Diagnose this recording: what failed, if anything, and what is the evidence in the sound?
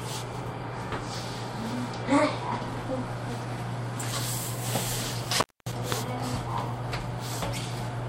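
Analogue wiring is the culprit here: an intermittent contact at 5.34 s, with the signal dropping out for about a quarter second (251 ms) and returning by 5.73 s. You get crackle at both edges and faint hiss in the gap, classic loose plug or cable briefly opening the line.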